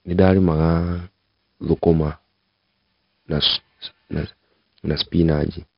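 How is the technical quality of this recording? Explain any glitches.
The recording has heavily degraded technical quality. 4-bit ADPCM compression affects the whole clip: each sample is coded as a coarse 4-bit step from a prediction, leaving gritty hiss riding on the speech and crunch on sharp attacks. Nothing is present above 5.3 kHz, so the sound is dull, which fits a sample rate near 11 kHz and about 44 kbps.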